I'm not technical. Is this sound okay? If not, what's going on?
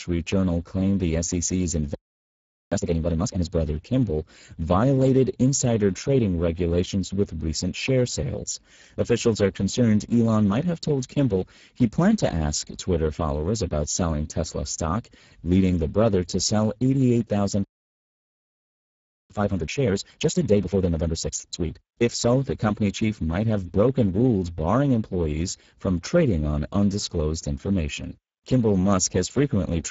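No. Throughout, the speech sounds rough, hoarse and somewhat noisy, with a dull top end and nothing above 7.7 kHz. That is Speex codec damage: this older internet-calling format squeezes the speech so hard that fine detail is lost and replaced with noise.

From 2.72 to 3.48 s, the speech suddenly rushes along at double speed, yet the pitch stays normal. That is a time-compressed catch-up: after a hold-up, the player trims small slices out of the delayed audio to get back on schedule.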